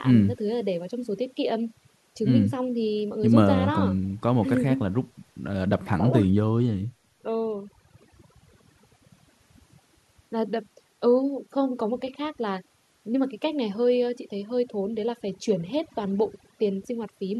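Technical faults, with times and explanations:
Throughout, overdone noise removal: a noise reduction stage was pushed too hard on this speech. Any frequency band sitting close to its idea of the background noise was pulled far down or cut out entirely, and the softer parts of the voice fell under that threshold along with the noise. What remains between phrases is near silence scattered with twinkling specks.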